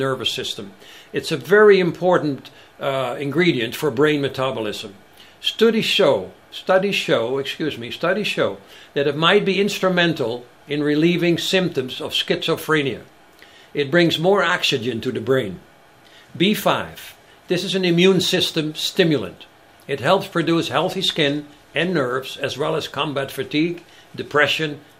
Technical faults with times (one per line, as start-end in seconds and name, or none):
none